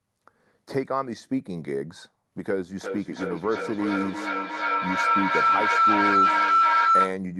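From 2.81 s to 7.23 s, a feedback howl takes over. Two devices in the same room share the call, so the speech leaves one loudspeaker, enters the other microphone and comes back louder on each pass. The repeats build instead of dying away and narrow to a tone of roughly 1.5 kHz, pulsing about every 0.4 s. At its peak it is about 7 dB above the speech, which comes through the call codec's band-limited path beneath it.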